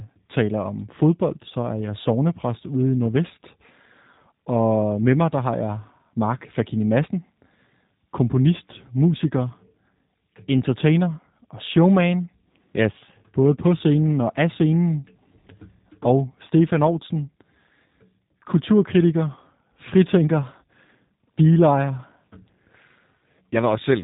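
From start to finish the speech sounds slightly rough and synthetic, with nothing above 3.8 kHz. That is G.729 codec damage: each 10 ms frame is rebuilt from a vocal tract filter, pitch prediction and a few pulses, which fits an 8 kbit/s stream.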